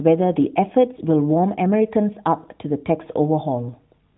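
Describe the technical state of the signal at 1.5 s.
At 1.5 s the speech is intact, with nothing beyond the ordinary narrowband sound of an AMR mobile call, whose highs stop at about 3.9 kHz.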